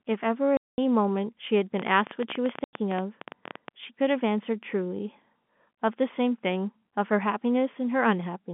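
At 0.57 s, packet loss filled with silence cuts a 210 ms hole in the speech. The waveform drops flat with hard edges, and the length fits several 30 ms packets. From 1.80 to 3.69 s, a train of clicks ticks at about 14 per second, unevenly spaced, about 30 in all, rising well above the speech. The likely cause is interference or a faulty connection. On a spectrogram these show as thin vertical lines. At 2.64 s, a second silent gap of 90 ms appears within those clicks, again shaped like whole lost packets. The telephone band, from 150 Hz to 3.5 kHz, stays visible throughout.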